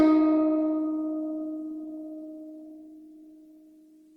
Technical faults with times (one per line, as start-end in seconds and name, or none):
0.00-4.16 Opus compression